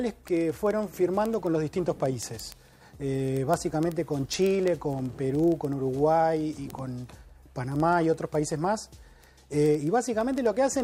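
From 0.12 s to 10.8 s, a regular train of ticks recurs roughly every 40 ms, several hundred in all. These are word clock ticks: the receiver's clock runs around 500 ppm off the sender's, so each time they slip, one sample is dropped or repeated.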